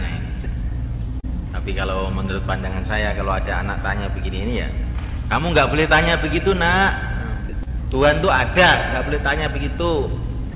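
At 0.44 s the sound briefly gives way to a flat, steady hiss for about 20 ms. This is sound dropped by the voice detector. The sender likely judged that moment to be background and stopped transmitting, so the receiver inserted comfort noise. The same thing happens at 7.49 to 7.53 s, lasting 40 ms, and again at 10.52 s. What sets these apart from packet loss is the texture. The gap is filled with featureless noise that doesn't follow the pitch or shape of the surrounding sound, and the real audio simply resumes when the detector triggers again.

From 1.20 to 1.25 s there is a short concealed packet loss. About 40 ms of audio arrived too late for the decoder, and around 31 ms of it was filled by extending the preceding sound before blending back. The same happens from 7.63 to 7.70 s, where 40 ms went missing and about 32 ms was filled, and the sound afterwards runs slightly late. These are heard as a brief smear or wobble that carries on the previous sound's character, not as a switch to hiss. 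Throughout the clip the G.711 A-law call path leaves nothing above 4 kHz, giving the sound a narrowband quality.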